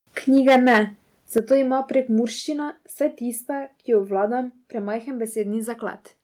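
From 0.36 to 0.8 s the loudest syllables turn harsh and crackly, with flattened tops. This is microphone overload, likely from an input volume set too high, so peaks run about 8 dB past the converter's limit and roughly a tenth of the samples are clipped. Almost at once, at 0.38 s, the microphone volume is stepped down by about 2 dB. The second overload, from 1.37 to 1.55 s, is milder, about 3 dB over with only a small share of samples clipped, so the crackle is lighter and briefer.

Each step-down is the call software pulling the device's input level down in one move after detecting that too-hot signal, likely a reaction to the clipping. The larger cut comes at 1.38 s, about 7 dB. What separates it from the overload is that nothing is distorted. Voice and background both drop together and stay lower, a clean change in loudness rather than a crackling edge on the peaks.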